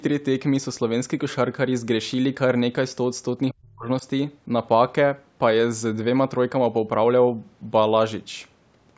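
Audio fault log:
3.53–4.04 s speech suppressed in double talk. The speech dips by up to about 40 dB for around 0.4 s, likely from an echo canceller ducking overlapping talk.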